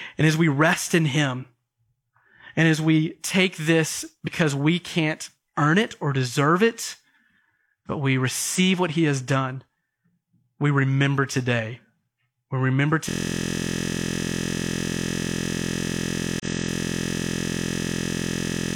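A speech clip with two kinds of technical fault. Damaged data in a compressed stream causes brief glitches at 4.23–4.29 s, 8.55–8.60 s and 16.40–16.45 s: corrupted frames make the decoder misread them, lose sync and skip ahead to the next valid frame header. From 13.09 s to the end, a system hang loop turns the audio into a steady buzz at about 43.1 Hz. The sound hardware kept replaying one 23.22 ms piece of its buffer, which fits a 1024-sample buffer, while the system stalled.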